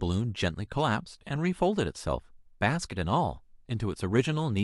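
Speech recording with no audible technical faults.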